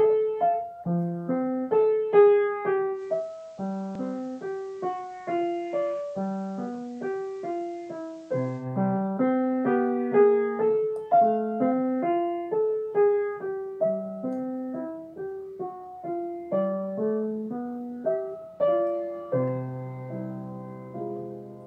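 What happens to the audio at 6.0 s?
Digital radio blending to analogue FM, spanning 2.92 to 8.68 s: after losing digital, level falls about 4 dB, and faint hiss rises.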